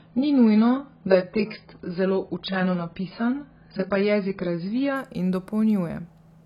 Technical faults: adaptive stream starting at a low bitrate

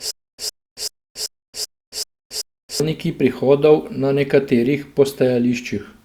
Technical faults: stutter with silent gaps

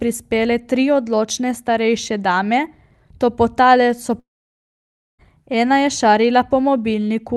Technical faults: long network dropout

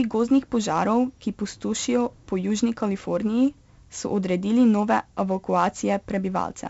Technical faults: 4-bit ADPCM compression

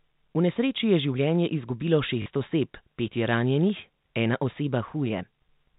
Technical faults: packet loss with last packet repeated

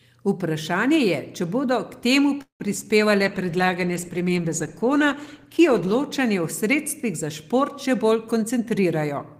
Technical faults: call audio freeze; short concealed packet loss; call bitrate drop; jitter buffer speed-up

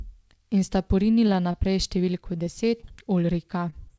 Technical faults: jitter buffer slow-down; scattered short gaps

